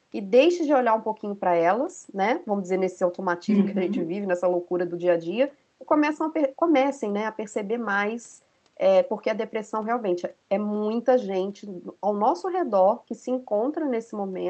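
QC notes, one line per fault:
No faults found anywhere in this speech recording.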